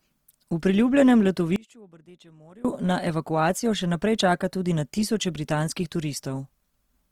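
Opus compression, running through the whole clip, most likely accounts for the rough, grainy texture of this speech. In its music mode the codec keeps each band's overall energy but, short of bits, fills band detail with folded copies of lower bands or with noise. That leaves tones sounding noisy rather than hollow or swirling. The full bandwidth stays open, and the damage is plainly audible, consistent with a low rate around 24 kbps.

Audio dropout to a faint residue, from 1.56 to 2.65 s, most likely happened because the wanted signal was lost for about 1.09 s while the path after the break stayed live. The speech cuts off abruptly rather than fading. Through the gap only a faint trace of sound remains, about 25 dB below the normal level. The speech returns just as suddenly with "na evakuacijo še".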